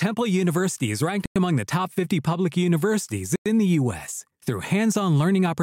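Two hard-edged silent holes of 100 ms cut into the speech, from 1.26 to 1.36 s after "is ranked" and from 3.36 to 3.46 s after "public universities". This is a gap between chunks: the audio arrives in 2-second pieces, and silence is inserted at each join.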